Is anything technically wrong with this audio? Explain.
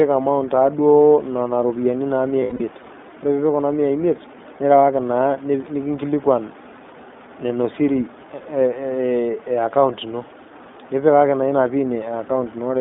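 Yes, two faults. Throughout, the speech passes through the iLBC codec, consistent with its 15.2 kbps, 20 ms frame mode, which limits it to about 200 Hz to 3.6 kHz and leaves it plainly rough and synthetic. From 2.40 to 2.61 s, lost iLBC frames totalling 140 ms, in runs up to about 70 ms, are concealed by repeating the last pitch cycle mixed with noise. This produces brief held, buzzy vowel sounds before clear speech resumes.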